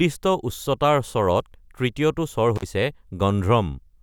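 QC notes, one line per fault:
2.56–2.63 s, intermittent contact: just after "তৃতীয়টো স্বৰ" the speech drops out with crackle at the edges, a loose connection opening for about 46 ms.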